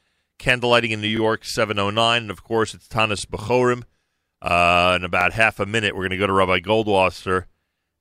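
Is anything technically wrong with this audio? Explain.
Yes, it has overlapping chunks. At 1.17, 3.19 (after "of course it's"), 5.21 (before "half a minute we're") and 7.23 s, each 2 s chunk starts early, replaying 21 ms as a quick stutter.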